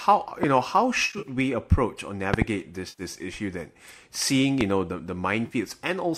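First up is a loud pop at 0.43–0.46 s, sitting roughly 15 dB above the speech. Another pair lands close together at 2.34–2.44 s, then a single one at 4.61 s, both around 20 dB up. Each is a sharp thump riding on top while the speech keeps going underneath. That's most likely a voltage spike from a plug, switch, static or driver glitch getting into the chain and ringing briefly as it passes through.

The other problem is AAC frame loss with concealment, in a stream that's likely low-delay AAC at around 64 kbps, with its short frames showing only light roughness. At 1.05–1.29 s about 130 ms goes missing in bits scattered over 200 ms, the longest gap around 50 ms, so you get a smeared, phasey stretch. Then 90 ms at 2.89–3.02 s and 50 ms at 5.46–5.55 s each come through as a brief noisy blur, where the decoder is papering over the holes with guesses built from the last good spectrum.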